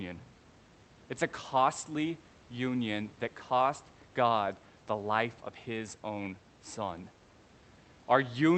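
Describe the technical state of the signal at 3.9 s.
At 3.9 s the speech signal is intact, with nothing wrong beyond the call codec's ordinary band-limiting and the faint room noise sitting well beneath the speech.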